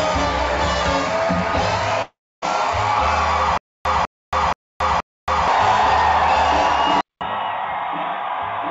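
Audio carried over a call path whose G.722 coding, fitting 64 kbps, reaches up to 8 kHz, has three faults. From 2.02 to 2.44 s the sound smears into a fading fill, then goes about 0.28 s silent and resumes further on, likely a long network dropout; unlike a stutter, nothing repeats. From 3.58 to 5.48 s a 0.2 s fragment plays four times, every 0.48 s, with 0.28 s of digital silence between, a stutter with silent gaps likely from a stalling stream. At 7.01 s a 0.2 s silence precedes duller audio cut off above 3.8 kHz, about 5 dB quieter, with a new noise floor roughly 55 dB down, likely the input switched to a poorer device, which a codec change alone wouldn't explain.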